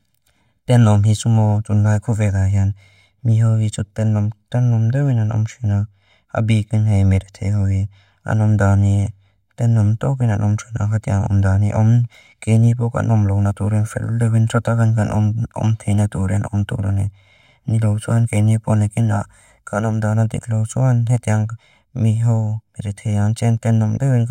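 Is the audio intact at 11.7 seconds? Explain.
No. At 11.7 seconds the speech has channel delay (comb filtering), which runs through the whole clip. One channel arrives roughly 1.5 ms behind the other, and when the two are folded to mono, the parts they share cancel at regularly spaced frequencies, starting around 400 Hz. Those fixed notches carve gaps through the spectrum, so the speech sounds hollow and phasey at this moment and at every other point in the recording.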